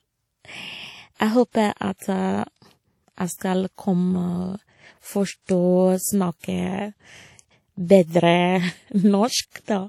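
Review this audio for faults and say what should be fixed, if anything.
The speech carries a ringing, washy texture with hiss that breathes with the level and nothing above 17.6 kHz. This is likely WMA compression, fitting an early encoder at roughly 48 kbps. Encode from the original at a higher bitrate or with a better codec.

Pre-echo appears at 1.14–1.20 s, 3.37–3.41 s and 9.50–9.55 s. In each case hiss arrives 40 to 58 ms ahead of a sharp onset, because the block's noise fills the quiet lead-in. Use shorter transform blocks or a codec with block switching.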